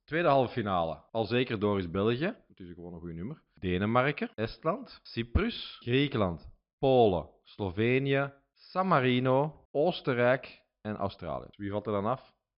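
No technical faults can be heard anywhere in the speech.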